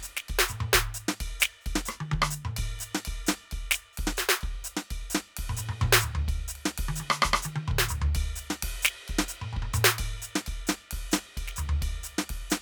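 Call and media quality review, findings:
Nothing to flag on this music clip; it listens fine all the way, with no fault heard anywhere in it.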